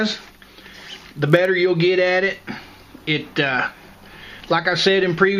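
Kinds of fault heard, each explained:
Block size mismatch (padded): from 0.58 to 1.47 s, one stage hands over blocks slightly shorter than the next stage reads, and the shortfall in each block is filled with silence. The result is a buzz at 46.9 Hz, which fits a 1024-sample read block. The timbre stays put, and the audio runs at 0.999 times normal speed, barely slower. On a waveform, thin near-silent notches recur at that spacing. A spectrogram shows vertical lines and harmonics of 46.9 Hz.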